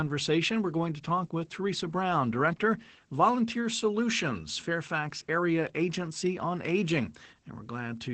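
Opus voice compression runs throughout: nothing above 8.6 kHz, and coarse SILK coding leaves the speech muffled and hoarse, fitting a low bitrate near 12 kbps.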